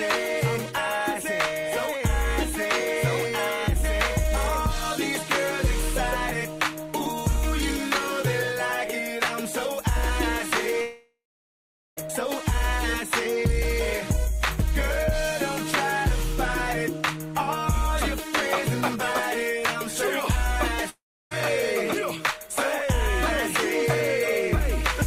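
At 10.81 s the audio breaks off for about 1.2 s, and at 20.89 s for about 0.4 s, likely a long network dropout each time. A short fading buzz continues the last sound, then silence (0.79 s, 0.32 s) leaves a blank gap on waveform and spectrogram before the audio resumes without the lost part.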